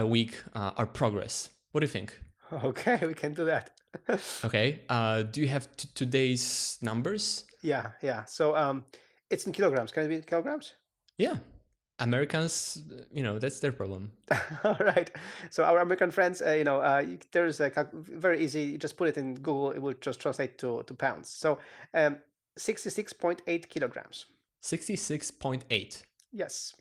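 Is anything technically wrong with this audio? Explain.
No technical faults are present.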